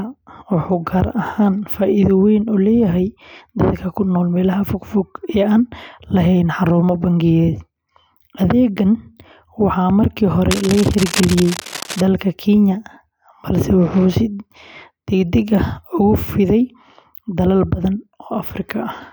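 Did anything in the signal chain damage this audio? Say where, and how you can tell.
Yes. After "waxaa markii", from 10.51 to 12.01 s, rustling bursts about 10 dB below the speech sit over it. This is cable scratch noise, likely from a worn analogue connector with shifting contact.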